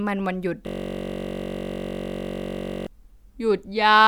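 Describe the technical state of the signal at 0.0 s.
At 0.0 s the speech signal is intact, with no audible fault.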